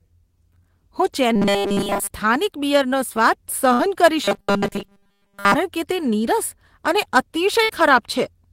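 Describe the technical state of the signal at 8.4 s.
At 8.4 s the speech signal is intact, with no dropout, click, distortion or other fault audible at that moment.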